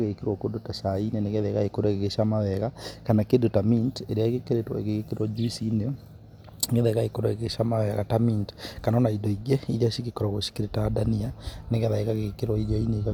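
No technical faults can be heard anywhere in the speech recording, and the signal holds steady throughout.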